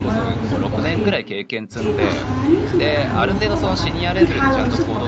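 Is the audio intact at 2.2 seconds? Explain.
Yes, the speech at 2.2 seconds is intact, with no dropout, glitch or other fault at that moment.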